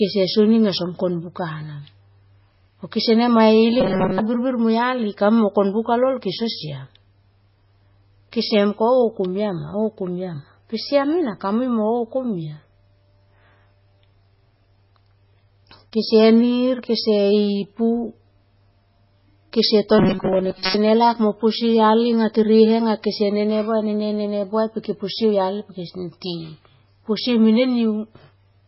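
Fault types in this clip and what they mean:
MP3 compression: Heavy, watery damage that likely comes from a very low bitrate near 16 kbps; spectrograms show nothing above 5.6 kHz and flickering, patchy frequency content.
Robotic sound from repeated short buffers: Twice, short chunks of sound likely repeat instead of new audio, giving a rigid 188 Hz buzz, seen as evenly spaced harmonic stripes and roughly repeating waveform cycles.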